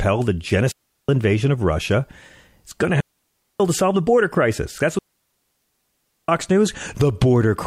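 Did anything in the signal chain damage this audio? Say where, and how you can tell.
Yes. Digital wireless dropout at 0.72–1.09 s, 3.00–3.60 s and 4.99–6.29 s: the speech falls into clean holes of near silence, 0.37, 0.59 and 1.3 s long, with no noise burst at either edge. The radio link lost too much data, so the receiver muted quickly.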